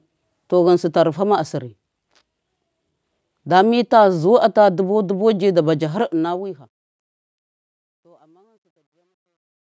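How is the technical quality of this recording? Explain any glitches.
There's one real problem, and it's in the fade-out. From 5.78 s, right after "bu ji", to the end at 9.66 s, you get truncation distortion on a fade. The fade-out was rendered at only 12 bits without dither. As the level drops toward the smallest step, the waveform collapses into coarse square steps. It turns gritty, worst from 7.77 s to the end. The call-style mic processing, with nothing above 8 kHz, is normal.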